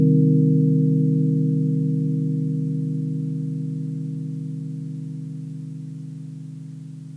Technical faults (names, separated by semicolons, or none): none